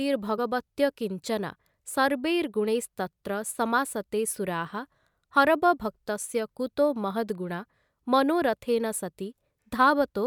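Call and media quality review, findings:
Compressed frames skipped at 0.37 s and 6.23 s: speech jumps ahead about one frame, consistent with 24 ms frames lost or rejected at decoder.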